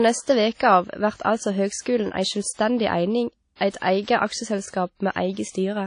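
Throughout the speech there is plainly audible ringing and a washy hiss that swells and fades with the signal, likely from WMA compression at a low bitrate, around 32 kbps. Long transform blocks smear quantisation noise over tens of milliseconds, and weak spectral lines are zeroed. A spectrogram shows a hard ceiling at 10.1 kHz and patchy gaps between harmonics.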